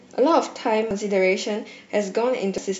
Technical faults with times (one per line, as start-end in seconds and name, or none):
0.91 damaged data in a compressed stream
2.58-2.67 damaged data in a compressed stream